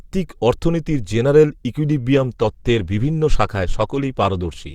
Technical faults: adaptive stream at a lower bitrate

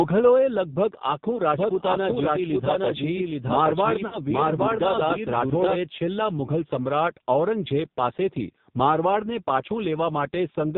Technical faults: AMR narrowband mobile codec; lost AMR speech frames; doubled audio track

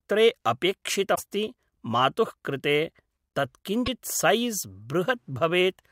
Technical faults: damaged data in a compressed stream

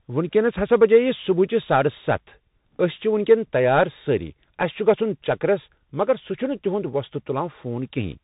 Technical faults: Bluetooth CVSD headset codec

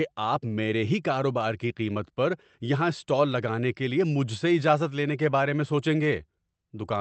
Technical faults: none

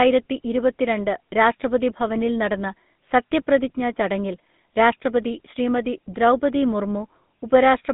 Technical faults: GSM full-rate codec

